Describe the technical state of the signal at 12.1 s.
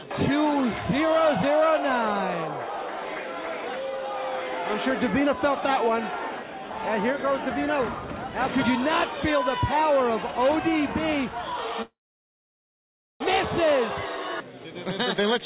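Packet delivery stalled and the jitter buffer likely ran dry, causing a call audio freeze from 11.82 to 13.22 s. A brief fading continuation of the last sound gives way to about 1.3 s of silence, then the audio resumes where it stopped, delayed rather than lost.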